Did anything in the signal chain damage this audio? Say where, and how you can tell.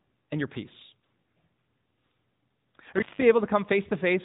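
Yes, two stages. At the codec stage, the speech has passed through the AMR narrowband mobile codec throughout. The whole clip is band-limited, with nothing above 4 kHz, and the voice has a plainly audible buzzy, synthetic edge, which fits a mid-rate mode around 10.2 kbps. The encoder rebuilds speech from a vocal-tract filter excited by a few pulses per subframe, so fine detail is lost. On a spectrogram the energy stops sharply at 4 kHz.

In the analogue wiring there is an intermittent contact from 2.96 to 3.22 s. The sound cuts out for about 170 ms, with crackle at each edge as a loose plug or cable opens and recloses, leaving only faint hiss in the gap. On the waveform it shows as a near-flat stretch bracketed by sharp spikes. On a spectrogram it shows as a dark vertical band framed by thin broadband streaks.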